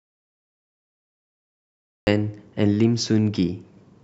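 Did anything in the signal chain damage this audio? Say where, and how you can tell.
Yes. There's an audio dropout to silence from the very start to 2.07 s: dead silence with no room tone at all, then the speech comes in mid-flow. Likely the input link dropped or got muted while the recorder kept writing, so that stretch is simply gone.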